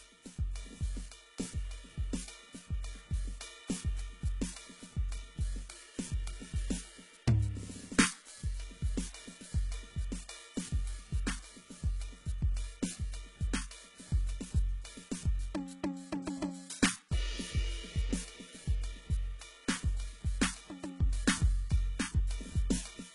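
A music recording whose top end sounds bright but false from start to finish: cymbals and other high, noisy sounds come across gritty and metallic, and nothing reaches above about 11.1 kHz. The cause is likely HE-AAC compression at a very low bitrate, consistent with roughly 12 kbps. Only the lower band is truly coded; the treble is rebuilt by copying lower bands upward, so its harmonics misalign with the real ones.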